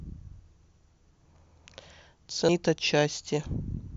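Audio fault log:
2.49 s, compressed frames skipped: roughly half a second of speech vanishes in one jump, which points to about five missing 92.9 ms frames.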